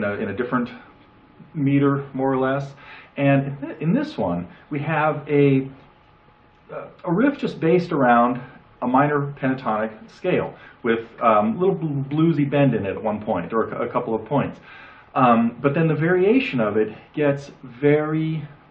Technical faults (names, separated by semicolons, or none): none